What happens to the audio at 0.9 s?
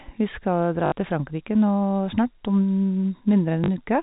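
Right around there the speech hits a bit of packet loss with the last packet repeated, running from 0.86 to 0.92 s, so about 60 ms missing, which fits three 20 ms packets dropping out in a row. The receiver just kept replaying the last good chunk until fresh data showed up. The run comes out as a brief robotic stutter with a buzz near 50 Hz.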